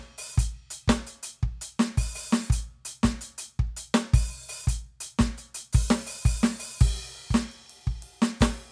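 No technical faults occur at any point in this music, so there is nothing to describe in time order.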